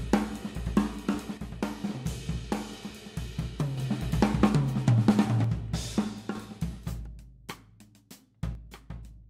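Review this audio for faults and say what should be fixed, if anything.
The level drops abruptly by about 6 dB from 1.38 to 3.78 s, 5.44 to 6.35 s, and 8.55 s to the end, likely from one channel dropping out before the mono sum. The waveform shows sudden steps down in amplitude, and a spectrogram shows those bands uniformly dimmer. Check stereo cabling and connectors so both channels stay present through the mono fold-down.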